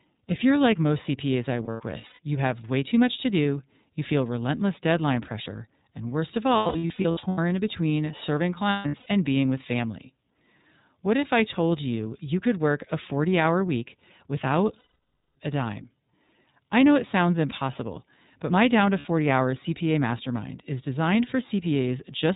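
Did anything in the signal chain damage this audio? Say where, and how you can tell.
Yes. The damage is at the codec stage: iLBC coding. Nothing above 4 kHz survives, and the speech has a plainly audible rough, synthetic edge. Each frame's excitation is coded on its own. The sound fits the 13.33 kbps mode with 30 ms frames.

The network stage lost iLBC frames. There are gaps at 1.65 to 2.19, 6.57 to 7.38, 8.70 to 9.06, 14.79 to 15.36, and 18.99 to 19.06 s. In the first three gaps the longest runs last about 0.1 to 0.15 s. In each gap the decoder repeats the last pitch cycle with added noise. That sounds like a held, buzzy vowel. Speech resumes almost at once.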